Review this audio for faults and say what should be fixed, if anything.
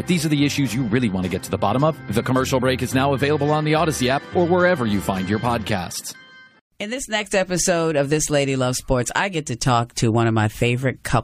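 No faults can be heard anywhere in the audio, so nothing needs to be fixed. It can be used as it is without any repair.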